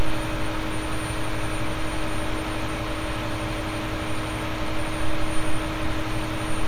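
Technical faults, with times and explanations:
No technical faults can be heard anywhere in this recording.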